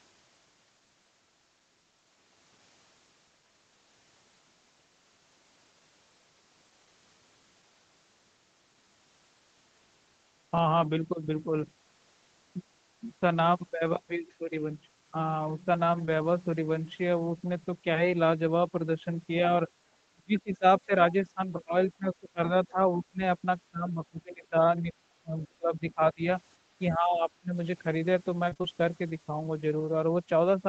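A speech recording carrying four kinds of call fault. At 16.05 to 16.09 s there is short concealed packet loss: about 20 ms never arrived and was bridged by extending the preceding sound, leaving a brief smear. Because it is a single isolated patch, it does not sound choppy. From 20.11 to 27.55 s the speech repeatedly dips or breaks up, most likely speech suppressed in double talk, where an echo canceller turned the talker down while the far end was also speaking. The dips fall at 20.11–20.91, 21.34–22.40, 22.71–23.22, 23.71–26.26 and 26.79–27.55 s and reach roughly 15 to 30 dB. These are level drops over longer spans, not brief smeared patches. Within the first dip, 20.38 to 20.81 s, the other side's voice is likely leaking through, faint at about 30 dB below the talker. It sounds like a second voice rather than a loss of the talker's own. Finally, 28.49 to 28.65 s has repeated packet loss (robotic sound): four gaps, the longest 22 ms, fill about half the span. 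This gives a chopped texture, unlike the single smear at 16 s.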